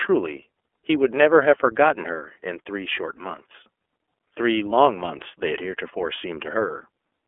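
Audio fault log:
throughout: iLBC codec. Speech is confined to roughly 300 Hz to 3.4 kHz and has a plainly audible rough, synthetic grain. Each 30 ms frame's excitation is coded independently, which fits iLBC's 13.33 kbps mode.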